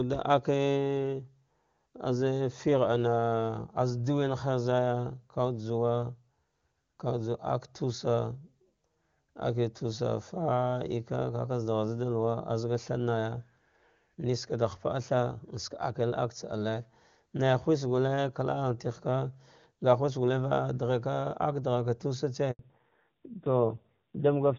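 At 22.51 s a handover gap cuts the speech: no frames arrive for about 80 ms while the call switches networks, so the voice fades out within a few tens of milliseconds and the line sits silent until 22.59 s, losing whatever fell in that span.

From 22.59 s to the end, the call shows a fallback to narrowband. Before the switch, the wideband AMR-WB coding sounds clean, which fits a high HD Voice rate. After it, nothing above 4 kHz remains, and the speech turns duller and rougher, which points to a low-rate AMR-NB mode.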